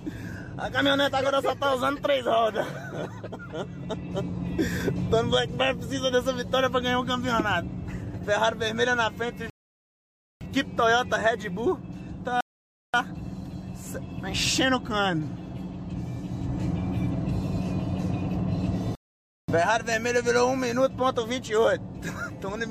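Rebuffering stalls at 9.50–10.41 s, 12.41–12.94 s and 18.95–19.48 s: playback starved of data, falling silent for about 0.91, 0.53 and 0.53 s, then resuming exactly where it stopped. The waveform flatlines and the spectrogram shows clean, empty vertical gaps.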